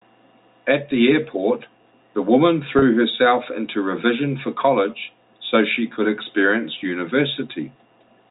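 At about 2.79 s there's a brief packet loss with pitch repetition, lasting roughly 30 ms to 2.82 s. The receiver filled the gap by looping the last pitch period, so the speech briefly sounds held and a bit buzzy. The short span points to a single dropped packet, heard through the band-limited G.711 telephone sound.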